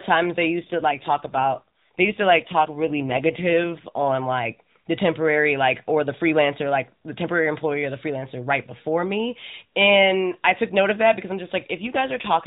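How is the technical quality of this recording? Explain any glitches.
Narrowband mobile speech, cut off at 4 kHz, with two stretches that turn rougher. AMR rate drop, from 0.60 to 4.12 s (after "times they", ending before "like the temporary like") and from 11.78 s to the end (after "of that because i'm"). The synthetic, buzzier quality points to the codec stepping down from 12.2 to 5.9 kbps. On a spectrogram the harmonics smear and blur with no gap, and the band stays the same.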